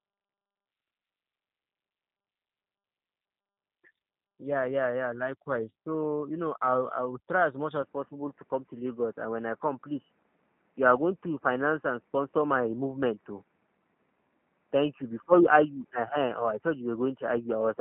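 From the start, the whole clip carries the roughness of the G.729 codec. Its sound fits an 8 kbit/s stream. Speech is rebuilt from a filter, a pitch predictor and a few pulses per frame. Nothing above 4 kHz survives. The result sounds plainly rough and synthetic.

At 7.82 s the sound narrows further and stays that way to the end. Everything above 3 kHz is gone, so speech turns duller and boxier. There is no gap at the change, and the level stays about the same. A faint new background noise sits far below the speech. The likely cause is an input switched to a poorer device.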